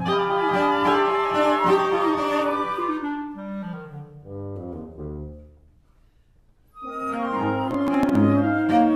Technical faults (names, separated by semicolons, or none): processor overload crackle